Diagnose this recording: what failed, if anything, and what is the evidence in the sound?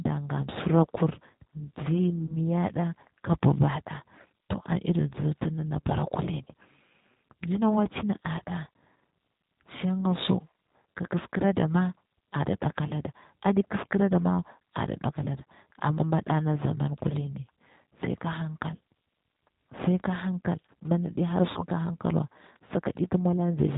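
The speech passes through a low-bitrate codec stage throughout. Its narrow band with nothing above 4 kHz, slightly rough, synthetic timbre and plainly audible codec damage fit the G.729 codec at 8 kbit/s, rebuilding speech from a vocal tract model and sparse pulses.

At the network stage, VoIP packet loss concealed by the speech codec appears at 2.27 to 2.38 s and 21.52 to 21.64 s. The decoder stretches its last pitch and filter into a fading buzzy tone or coloured noise, covering about 20 ms, then about 40 ms, which fits one then two lost packets, and stays weak briefly afterward.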